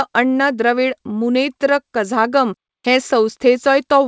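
The speech carries no technical faults, and its band ends at 8 kHz, which fits a wideband call codec such as G.722 on a WebRTC call path.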